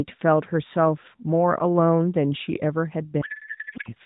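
From 3.22 to 3.93 s, a codec payload misread turns the AMR speech into garbled warbling noise, which fits octet-aligned frames being unpacked as bandwidth-efficient.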